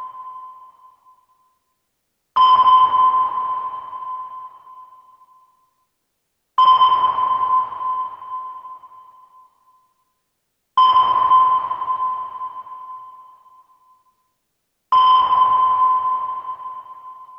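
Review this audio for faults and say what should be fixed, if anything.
No technical faults are audible anywhere in the signal, so nothing needs to be fixed.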